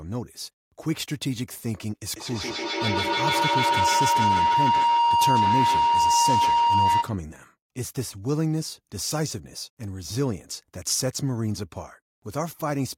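From 2.1 s to 7.26 s the speech is swamped by feedback howl: a microphone and a loudspeaker in the same room are feeding each other, and each pass around that loop comes back louder. The sound narrows to a ringing tone near 1 kHz that pulses roughly every 150 ms and peaks about 5 dB above the speech. A spectrogram shows a bright horizontal line near 1 kHz, beaded at that spacing, while the waveform envelope swells and throbs until the howl breaks off.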